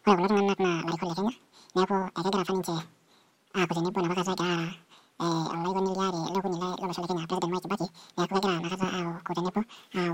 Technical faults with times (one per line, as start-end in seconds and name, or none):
0.00-10.14 audio read two samples at a time (double speed)